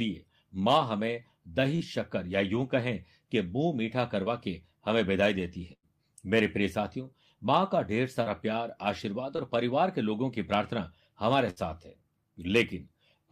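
At 1.75 s the first short concealed packet loss occurs: about 40 ms of the speech stream did not arrive in time, and the decoder covered the gap by extending the preceding sound before crossfading back into real audio. It comes across as a brief smear in the speech. The same fault recurs at 4.24 s, where 20 ms is missing and a few milliseconds of surrounding audio were also trimmed as the stream realigned.

At 5.73 s a burst of packet loss takes out about 100 ms. The receiver holds the last sound and lets it decay over the gap, so there is a held, fading tail, and the speech then picks up further along with that stretch gone.

Further short concealed packet losses follow at 8.23 s (40 ms lost) and 9.36 s (20 ms lost), each heard as a short smear or wobble.

A second burst of packet loss at 11.50 s removes about 60 ms. It behaves like the earlier one, with a decaying hold-over and a jump forward when audio resumes.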